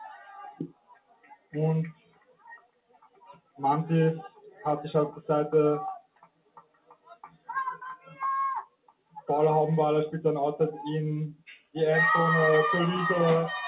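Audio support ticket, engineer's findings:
Noise suppressor applied to music or sounds, throughout the clip. A speech-tuned suppressor is treating sustained content and tails as noise. Gain swings by about 20 dB: attacks pass, held tones sink, and the result pumps and thins. The top end stops at 4 kHz, consistent with a narrowband G.711 A-law call path.

Sound cut by the noise suppressor, at seven points:
0.07–1.54 s, 1.93–3.6 s, 6.0–7.49 s and 8.66–9.29 s, down about 20 dB.
4.29–4.65 s and 7.96–8.19 s, down about 11 dB.
11.35–11.75 s, down about 19 dB.
The suppressor classifies these steady or decaying passages as noise and pulls their level and decays down.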